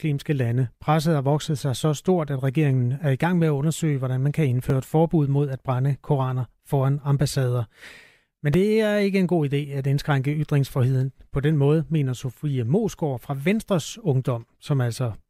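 A regular click cuts into the speech about every 3.83 s, four or so times from 0.87 s to 12.36 s. These are likely clock drift buffer slips: two clocks disagreeing by roughly 400 ppm, so a buffer periodically drops or repeats a block of about 70 samples.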